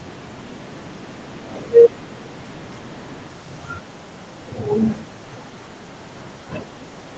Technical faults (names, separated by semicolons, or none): echo leak